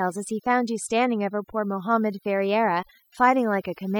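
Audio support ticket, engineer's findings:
Overdone noise removal, throughout the speech. Noise reduction set too aggressive: bands near the noise estimate pushed down or gated off, taking quiet speech detail with them. Background dropped, breaking into twinkling specks. Probable component: denoiser stage, strength too high.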